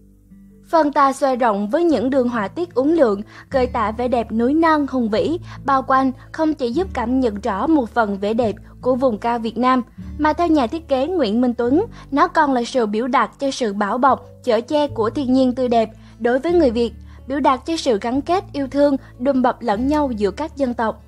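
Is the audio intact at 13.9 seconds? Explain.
Yes, the audio is intact at 13.9 seconds, with no dropout, click, distortion or other fault audible at that point.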